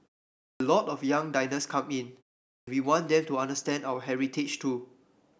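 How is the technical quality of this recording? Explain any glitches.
The recording has two clipped starts after a pause, at 0.51 s and 2.58 s. Each follows a short silence (about 0.5 s and 0.44 s), and the output seems to doze off and need roughly 93 ms to wake, so the speech pops in abruptly with its opening sounds missing.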